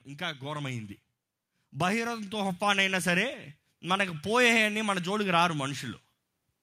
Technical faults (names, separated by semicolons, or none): automatic gain rising